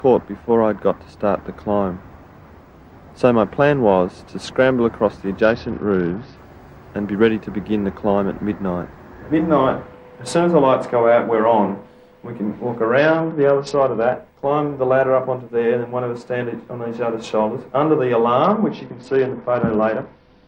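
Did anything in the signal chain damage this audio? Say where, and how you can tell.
Yes, at the codec stage. A Bluetooth SBC bit pool drop occurs at 5.42–6.36 s, 12.98–14.13 s and from 18.44 s to the end. The treble dulls and a gritty grain rises, which fits the bit pool falling from 31 to 8 (about 66 kbps). With so few bits, the upper sub-bands are starved. Unlike packet loss, the sound never gaps.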